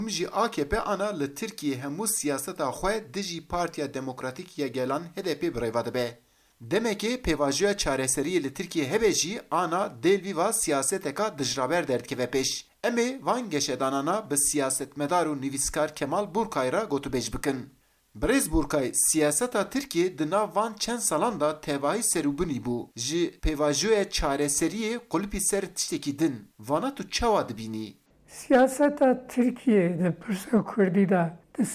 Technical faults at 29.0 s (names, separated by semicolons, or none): none